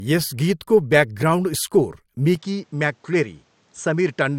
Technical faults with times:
0.00-4.38 low-bitrate audio saved at a high bitrate
2.35-4.38 input switched to a poorer device

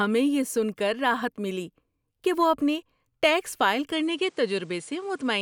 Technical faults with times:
3.92-5.42 input switched to a poorer device

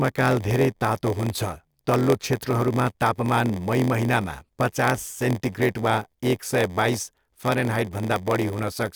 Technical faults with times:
0.00-8.96 block size mismatch (padded)

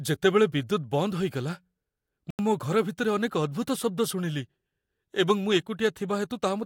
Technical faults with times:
2.30-2.39 block of digital silence

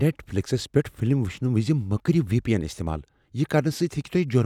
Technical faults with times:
none

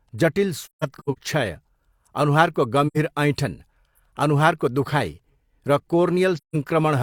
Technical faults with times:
0.62-1.18 AAC frame loss with muting
2.87-2.97 AAC frame loss with muting
6.37-6.56 AAC frame loss with muting

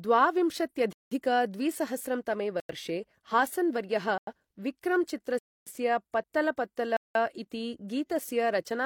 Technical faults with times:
0.93-1.11 block of digital silence
2.60-2.69 block of digital silence
3.29-3.32 damaged data in a compressed stream
4.18-4.27 block of digital silence
5.39-5.67 block of digital silence
6.18-6.24 damaged data in a compressed stream
6.97-7.15 block of digital silence

